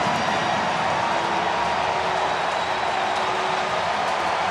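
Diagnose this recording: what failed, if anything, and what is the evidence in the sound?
Nothing in the signal chain seems to have failed here, since there's no fault to be heard at any stage, from the wiring through to playback.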